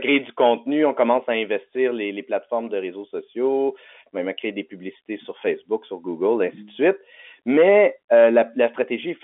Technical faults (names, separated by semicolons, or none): none